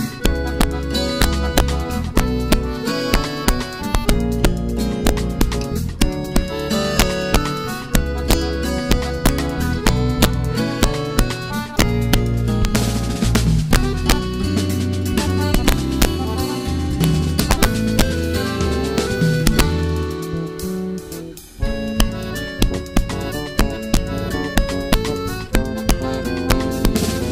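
Integer overflow runs throughout: with the level pushed about 1 dB past full scale, the rare peaks that exceed it (well under one percent of samples) wrap to the opposite extreme instead of flattening, giving sharp, violent cracks rather than clipping's duller, buzzy distortion.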